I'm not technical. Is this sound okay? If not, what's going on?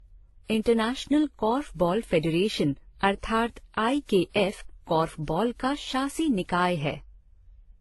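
No. Throughout the whole speech clip there is what sounds like transcoding between lossy codecs: the recording was likely squeezed by one compression format, then re-squeezed by others. Each pass added its own smearing and garble, and nothing above 11.8 kHz survives.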